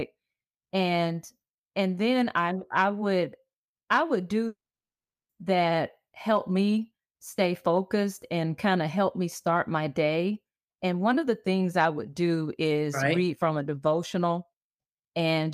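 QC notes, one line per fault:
4.47–5.31 s, long network dropout: audio likely stopped arriving; a brief fading buzz becomes 0.74 s of silence, and speech resumes with 0.82 s lost.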